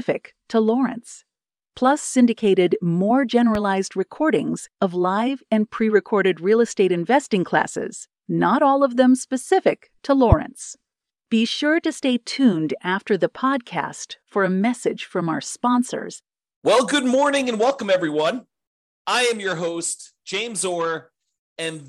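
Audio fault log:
3.55–3.58 s, loud pop: a single sharp pop about 10 dB above the speech, after "syndicated more", likely a brief voltage spike; the waveform shows a narrow spike and the spectrogram a thin full-band vertical stripe.
10.32–10.35 s, loud pop: a single, harder pop about 20 dB above the speech, after "of them specific to", likely another voltage spike; the waveform shows a taller spike and the spectrogram a bright vertical stripe.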